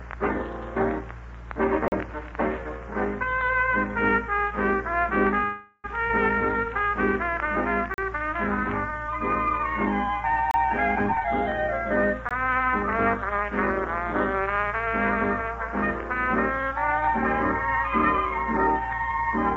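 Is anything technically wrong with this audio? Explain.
Yes. There are several faults, all in a call path whose bandwidth stops at 8 kHz, which fits G.722 at 64 kbps.

Block of digital silence, four times: 1.88–1.92 s, 7.94–7.98 s, 10.51–10.54 s and 12.29–12.31 s. In each case the output buffer was not filled in time, or a calculation produced invalid values, so a run of samples was set to zero. The holes last 40, 40, 29 and 20 ms. Each one cuts straight to silence and back with no fade. At these lengths they come across as short holes.

Call audio freeze, 5.44–5.86 s. The likely cause is packets being delayed in transit until the jitter buffer ran dry. The receiver then kept repeating the last sound for about 400 ms, which you hear as a fading buzz or hiss with no true silence. When the packets arrived, the audio resumed exactly where it had stopped. Nothing is lost, but a 400 ms pause has been inserted and the delay grows by that amount.

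Skip ahead, 6.08–6.11 s. Audio was already queued when a stretch was dropped, either in transit or when the buffer overflowed. Playback jumps forward with only about 14 ms of filler. Roughly a fifth of a second of material is missing, and the two sides of the jump are joined almost directly. This recovers part of the delay built up during the freeze.

Jitter buffer slow-down, 6.66–10.67 s. The buffer was low on audio, so the receiver built a reserve by repeating single pitch periods and slivers of pauses. This adds 126 ms over about four seconds, so playback runs at 97% speed with the pitch unchanged. Sounds are slightly drawn out and there may be a faint warble. The silence blocks at 7.94 s and 10.51 s fall inside this stretch.

Jitter buffer speed-up, 11.06–12.95 s and 14.41–16.71 s. The buffer held more audio than its target, so the receiver trimmed short pieces of one or a few pitch periods, again and again. 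The first stretch runs at 112% and removes about a fifth of a second, which sounds noticeably hurried at the same pitch. The second runs at 102% and removes only a few tens of milliseconds, so it is barely noticeable.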